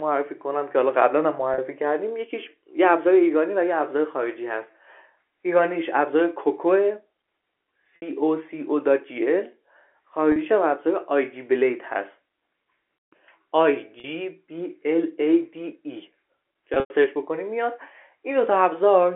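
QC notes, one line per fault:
1.54 s, 7.96 s, 10.32 s, 14.00 s and 16.74 to 16.90 s, packet loss with pitch repetition: gaps of 40, 60, 40 and 40 ms, then 120 ms scattered over 160 ms, which fits 20 ms packets. The last pitch period repeats as a held, buzzy tone fading over about 50 ms, so the 100 ms run fades to silence before a short cross-fade. The waveform shows identical repeated cycles tapering off, and the spectrogram shows flat, unchanging harmonic stripes within the 300 to 3400 Hz telephone band.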